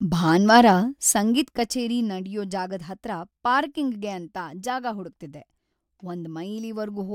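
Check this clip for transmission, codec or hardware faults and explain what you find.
One fault shows up, zipper noise between 0.8 and 2.2 s. The gain control applying a level drop of roughly 15 dB moves in coarse, unsmoothed steps, about thirty per second, rather than gliding. Each jump in gain puts a tiny discontinuity into the waveform, so while the speech fades down a fast ticking, zipping texture rides on top of it.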